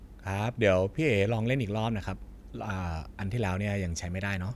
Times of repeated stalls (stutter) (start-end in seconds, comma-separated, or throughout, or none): none